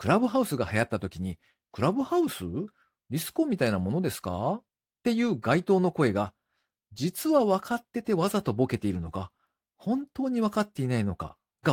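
No technical faults can be heard.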